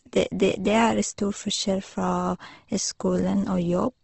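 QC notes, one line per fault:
Throughout: Opus compression. The speech sounds rough and grainy, with nothing above 8.2 kHz, likely from Opus in its music mode at a low rate around 16 kbps, where bands short of bits are filled with folded or noise-like content instead of left empty.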